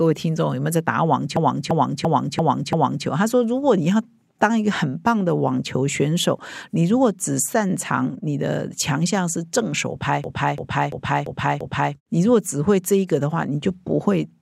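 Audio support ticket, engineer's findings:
System hang loop, 1.37–3.07 s and 10.24–11.95 s. The same 341 ms slice of speech repeats five times each time, a stutter at 2.93 Hz. The driver or host stalled while the hardware kept replaying its ring buffer; the loop length fits a 16384-sample buffer. Little or no audio lost.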